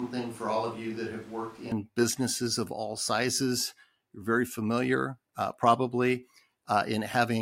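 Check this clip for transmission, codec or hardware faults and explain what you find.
One fault is present: a switch to a distant microphone. From the start of the clip to 1.72 s, just before "businesses of all sizes", the speech sounds roomy and hollow, thin in the bass, roughly 5 dB quieter, with room noise about 20 dB below it. The likely cause is the close microphone dropping out, so a farther one carries the audio until the abrupt return.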